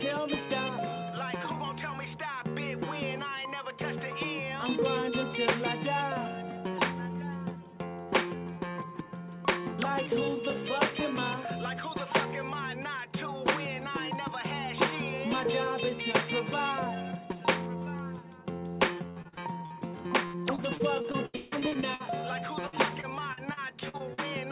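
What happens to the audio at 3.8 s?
Nothing goes wrong at 3.8 s: the audio runs on intact through the call path, band-limited to nothing above 4 kHz as a narrowband G.711 mu-law link would leave it.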